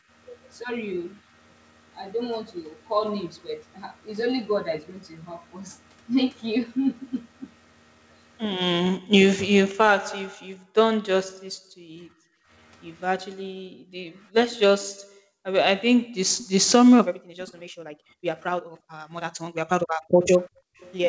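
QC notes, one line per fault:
0.0–0.09 s, 8.99–9.11 s, 10.29–16.21 s, 17.13–18.94 s, 19.85–20.79 s: background gated by the echo canceller. Room sound dips by about 40 dB (about 25 dB at the start) while the far end plays, then returns when the canceller releases.
16.38–16.47 s, 17.48–17.52 s, 20.22–20.93 s: echo leak. A faint copy of the audio arrives 348 ms late, about 20 to 30 dB below the main signal, likely loudspeaker pickup that the canceller failed to remove.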